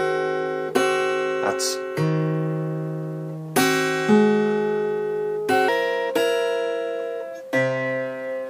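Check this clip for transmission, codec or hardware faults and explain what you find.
One fault: from 5.68 s to the end, a section at the wrong speed runs 1.25 times too fast, likely a clock mismatch, so the sound jumps about four semitones higher and hurried.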